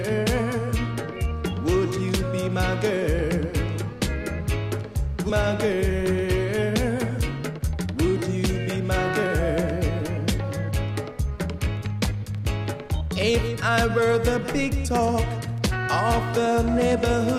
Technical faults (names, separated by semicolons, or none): skip ahead; jitter buffer speed-up